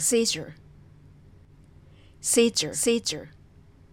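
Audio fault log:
throughout: doubled audio track, a full-band copy about half a second late and about 5 dB down, lacking an echo's decay; likely captured twice.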